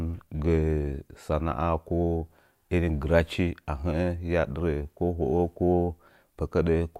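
No faults are audible anywhere in this speech recording.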